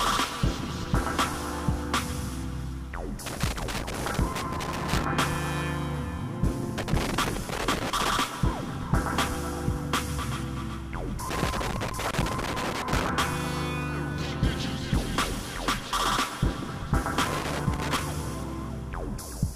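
Loose connector crackle appears from 3.26 to 5.04 s, 6.78 to 8.10 s, 11.29 to 13.09 s and 17.25 to 18.01 s, as a worn contact rapidly makes and breaks, chopping the signal. Each burst sounds like irregular scratching, showing as jagged waveform dropouts and spikes with broadband vertical streaks on a spectrogram.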